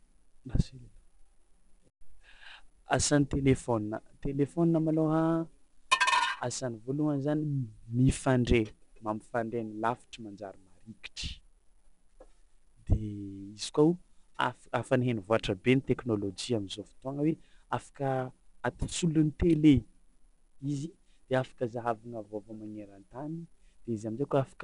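From start to finish the speech carries 4-bit ADPCM compression. Each sample is a coarse step from a prediction, so a plainly audible gritty hiss tracks every loud passage. A spectrogram shows that noise swelling with level and nothing above 10.6 kHz, which fits roughly 88 kbps.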